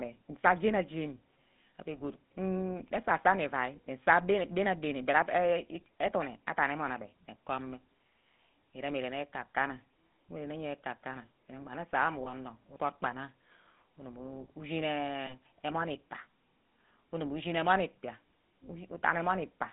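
Speech carrying the GSM full-rate codec throughout: a buzzy, gravelly roughness within a band of roughly 150 Hz to 3.6 kHz, which fits a 13 kbps full-rate link rather than plain narrowband filtering. Lost GSM frames at 12.24–12.32 s and 15.26–15.34 s produce a brief metallic ring, not a gap or click, which fits a single 20 ms frame each time.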